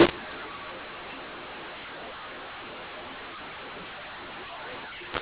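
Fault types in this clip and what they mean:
mu-law and A-law mixed up: the speech was coded as G.711 A-law but decoded with the mu-law table, so every byte maps to the wrong level throughout the 5 s. Loud and soft samples are scrambled and near-silent samples jump well above zero, giving harsh, gritty speech. On a waveform the pauses are thick bands of noise instead of flat lines. On a spectrogram, broadband hash fills every gap up to the 4 kHz telephone ceiling.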